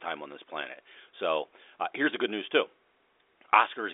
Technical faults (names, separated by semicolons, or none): none